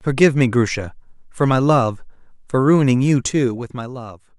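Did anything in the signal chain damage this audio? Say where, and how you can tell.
Yes, there's zipper noise from 3.11 to 4.37 s, where a level drop of roughly 15 dB lands as 1 dB steps at about 20 a second. Each jump ticks audibly, so the gain stage is stepping per buffer instead of ramping smoothly.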